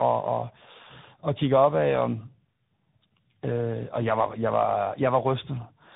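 Throughout, tandem speech coding: the sound passed through an AMR-NB-like coder, then a CVSD-like one, each re-coding degraded output, leaving rough, warbly, muffled speech with nothing above 3.8 kHz.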